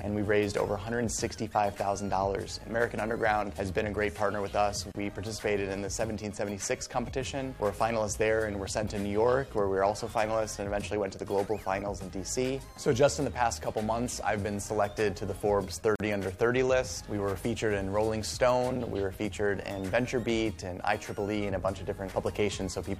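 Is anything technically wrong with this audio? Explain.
Yes, there are two gaps at a join of encoded pieces, at 4.92 to 4.95 s (about 32 ms) and 15.96 to 16.0 s (about 45 ms). The audio was encoded in separate chunks and spliced untrimmed, so encoder start-up delay and last-frame padding leave a short silence with smeared edges before it carries on.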